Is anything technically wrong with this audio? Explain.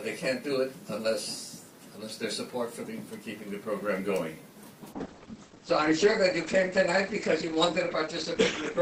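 Yes. From 4.93 s to the end at 8.81 s, the adaptive stream drops to a lower bitrate, which fits a switch from about 64 to 16 kbit/s Opus after the connection slowed. Treble vanishes above 8.7 kHz, codec artefacts rise, and the change is abrupt, with no gap.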